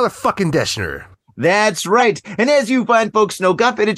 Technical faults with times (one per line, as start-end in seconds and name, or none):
1.99-2.02 corrupt frame decoded
3.08-3.12 corrupt frame decoded